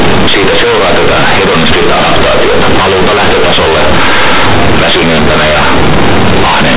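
From start to finish the speech is companded audio read as linear. Mu-law bytes are played as plain 8-bit samples without expansion, so the telephone-band signal turns into loud, buzzy distortion with strong noise in the pauses.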